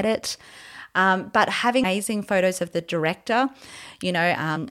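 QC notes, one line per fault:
1.84 s and 4.55 to 4.58 s, damaged data in a compressed stream: a brief glitch just before "photos of the", then another short glitch near the end. Corrupted bytes made the decoder misread those frames and lose sync until it found the next valid frame header.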